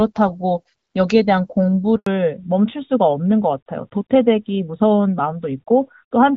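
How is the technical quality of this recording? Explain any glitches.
The recording has two linked glitches around the 2-second mark, both typical of a mobile call changing networks.

Handover gap, 1.96 to 2.06 s: the call switched networks and no speech frames arrived for 100 ms, so the voice cuts to silence and that fragment is lost.

Fallback to narrowband, from 2.06 s to the end: the call drops from HD Voice to an older narrowband codec. Nothing above 4 kHz remains, so the speech sounds duller and rougher.

Before the switch, the light coding of the AMR wideband (HD Voice) codec is consistent with a rate around 12.65 kbit/s. The narrower sound afterwards points to AMR narrowband at roughly 12.2 kbit/s.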